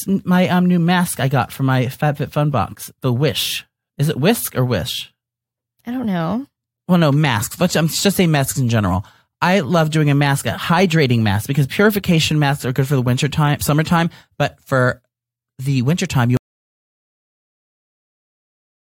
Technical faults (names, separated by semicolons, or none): audio dropout to silence